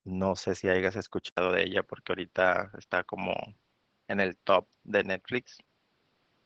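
Throughout, the speech passes through Opus voice compression at 12 kbps, coded by the SILK linear-prediction coder in wideband mode with 20 ms frames. The band stops near 8 kHz and the coarse excitation coding makes the voice plainly muffled, hoarse and faintly robotic.

At 1.29 s the input likely switched to a poorer device. An 80 ms silence marks the change. After it, nothing reaches above 6 kHz, so the voice turns duller and boxier at about the same level, over a faint new noise floor well below the speech.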